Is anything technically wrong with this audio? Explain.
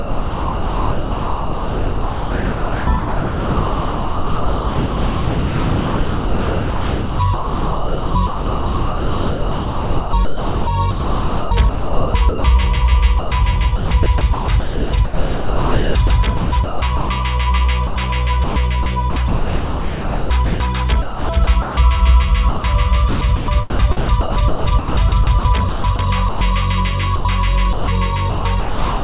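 Yes. There is sound chopped by the voice detector in five stretches: 0.0 to 12.44 s, 13.19 to 17.09 s, 17.87 to 21.77 s, 22.49 to 26.41 s and 27.16 to 29.03 s. The sending side likely kept switching transmission off whenever it judged the input quiet enough, and the receiver filled those gaps with synthetic comfort noise. About 11.4 s of the first stretch is replaced, then about 2.2 s, 1.9 s, 1.5 s and 0.8 s in the later ones. The result is choppy sound with clipped edges. The audio also has nothing above 4 kHz, which fits a narrowband G.711 call path.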